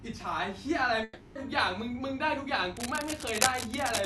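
From 1.03 to 1.38 s the speech breaks off. About 0.32 s of it is gone for good. A fading buzzy continuation of the last sound fills the gap, with no silence. This is likely a long network dropout on the call path.

From 2.77 s to the end, rough scratching rustles over the speech. It is only a little quieter than the speech itself. The bursts are dense and uneven. This is cable scratch noise, likely from a worn cable or connector being moved.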